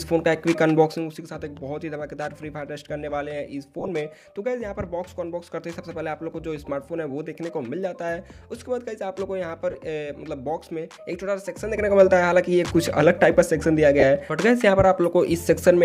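Bluetooth LE Audio frames went missing three times, at 3.79 to 3.89 s (about 52 ms lost in short bursts, longest near 20 ms), 9.71 s and 14.00 s, and the LC3 decoder papered over each gap by repeating its last spectrum with scrambled signs, leaving brief noisy smears.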